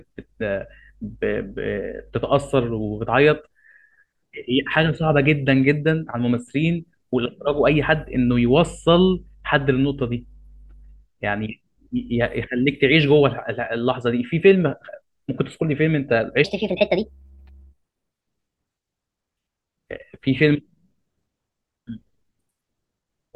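From 16.44 to 18.21 s a section at the wrong speed runs 1.36 times fast, speech jumping about five semitones higher and hurried, likely from a clock mismatch.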